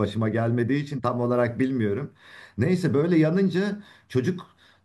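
No technical faults can be heard anywhere in the speech.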